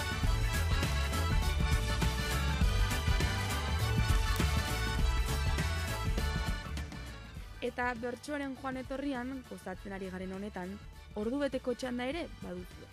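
From 0.19 s to the end, word clock ticks: sharp, uneven clicks about ten per second from a roughly 200 ppm clock mismatch, seen as evenly spaced thin vertical spectrogram lines.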